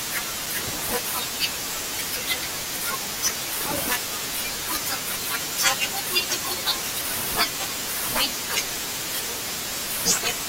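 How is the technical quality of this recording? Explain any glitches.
A loose connector crackle is the one glitch, from 0.45 to 0.55 s: a dirty contact briefly makes and breaks, chopping the speech signal into a short, irregular burst of scratchy crackle.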